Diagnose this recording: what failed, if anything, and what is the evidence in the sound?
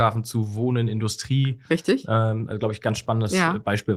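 Nothing failed in this recording, and the sound gives no evidence of any fault.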